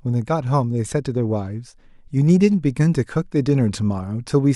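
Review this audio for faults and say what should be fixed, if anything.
No faults found; nothing needs fixing.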